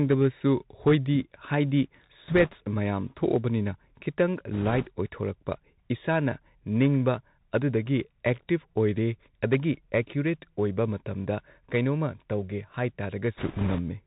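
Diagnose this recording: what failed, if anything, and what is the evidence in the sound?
The whole take went through a Bluetooth CVSD headset codec, and the damage is plain: it's cut off at 4 kHz, s sounds turn scratchy, and a granular hiss sits underneath. One-bit up/down coding with an adaptive step, which fits a 64 kbps headset link.

Bit errors on a Bluetooth voice link show up at 2.28–2.55 s (right before "ꯃꯌꯥꯝ ꯊꯣꯛꯑꯕꯅꯤꯅ"), 4.53–4.88 s and 13.37–13.80 s as a rushing crackle, not clicks. That's the radio link flipping bits. The last burst is roughest, with an error rate of several percent.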